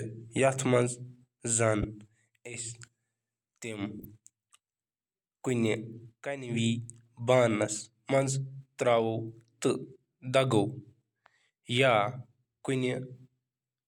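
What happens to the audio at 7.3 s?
Nothing goes wrong at 7.3 s; the speech runs on intact through that moment, with no dropout, click or distortion.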